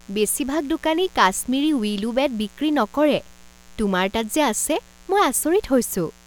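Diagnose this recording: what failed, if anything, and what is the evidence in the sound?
Mains buzz runs through the whole recording, from start to finish, sitting roughly 30 dB below the speech. The fault is in the analogue wiring. The buzz is steady and raspy rather than a smooth hum, with its harmonic ladder built on 60 Hz and climbing into the kilohertz range. That sharp, spiky character points to switching pulses from a dimmer, rectifier or unshielded run coupling into the signal path twice per mains cycle.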